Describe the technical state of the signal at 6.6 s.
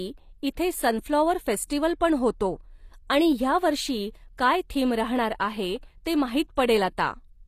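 At 6.56 s, right after "थीम राहणार आहे ते", there is a pre-echo: a brief hiss of about 16 ms arrives just before a sharp speech onset, which loses its crispness. The codec spreads quantisation noise evenly across its transform block, so noise sized for the loud attack also fills the quiet gap before it. On a spectrogram this appears as a broadband smear leading the onset; on the waveform, low-level fuzz precedes the transient instead of clean silence.

Underlying this moment is plainly audible HE-AAC compression, likely the cause of the gritty, metallic treble, with a character that fits a low bitrate around 24 kbps. The upper spectrum is not coded directly but rebuilt by copying lower bands upward, so its harmonics do not line up with those below, and sibilants sound gritty or lispy. A spectrogram shows repeated, blocky high-band texture cut off sharply at about 14.9 kHz, with nothing above.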